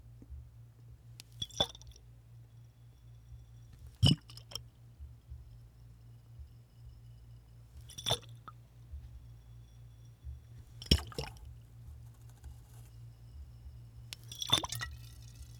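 Everyday sounds, with no technical faults heard anywhere.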